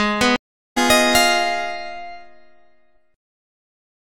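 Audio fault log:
0.36–0.78 s stream reconnect: about 0.4 s of silence while the connection dropped, then a fresh decoder resumes the sound roughly half a second further on.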